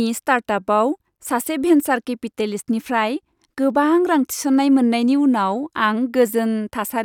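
No technical faults are audible at any point in the speech recording.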